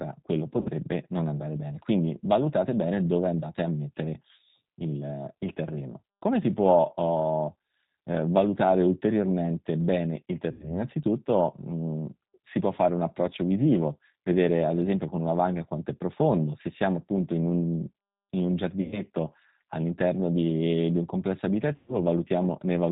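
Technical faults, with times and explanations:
Throughout, G.729 codec: the speech has been squeezed through a low-rate model-based coder, consistent with 8 kbit/s G.729A, that rebuilds each frame from a vocal tract filter, pitch predictor and a few pulses, so nothing above 4 kHz survives and the speech sounds plainly rough and synthetic.
0.61–0.69 s, 10.52–10.74 s, 18.82–19.01 s and 21.76–21.97 s, VoIP packet loss concealed by the speech codec: chunks of about 40, 80, 100 and 120 ms went missing. The decoder extended its last pitch and filter with falling gain, producing a fading buzzy tone or coloured noise, and the voice stays weak or distorted for a while after packets resume.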